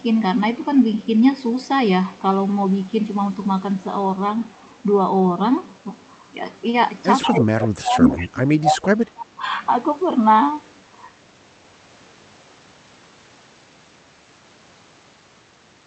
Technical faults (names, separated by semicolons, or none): echo leak; speech suppressed in double talk